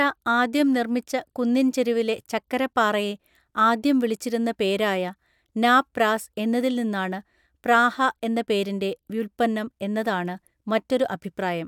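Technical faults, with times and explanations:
Nothing technical stands out anywhere in this speech recording; it's all in good shape.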